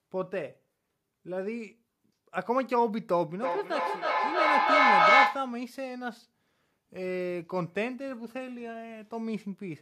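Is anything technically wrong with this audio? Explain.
Yes. From 3.42 to 5.58 s there is feedback echo between two devices. Two devices in the same room share the call, and one plays out what the other's microphone sent; that microphone captures it again, and neither echo canceller removes sound played by the other device. The speech returns at a steady interval of roughly 0.3 s, and here the loop builds, peaking about 10 dB above the speech, instead of fading. That regular spacing and growth sets it apart from room reverberation.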